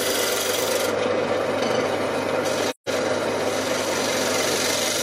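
From 2.70 to 2.89 s the sound fades into a soft-edged silent gap of about 170 ms: AAC frame loss with muting, fitting four dropped frames, their spectrum zeroed.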